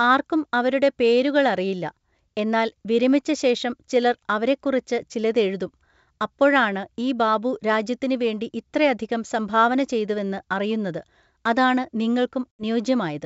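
At 12.52 s the speech drops into a sudden hole that lasts until 12.63 s. This is packet loss on an ADPCM call. About 80 ms of audio, a handful of packets, went missing and was filled with silence. The edges of the gap are hard. The decoder's predictor and step size lost track of the sender's, so when the sound returns it comes back with brief, slight distortion. The G.722 wideband coding stays clear up to 7 kHz.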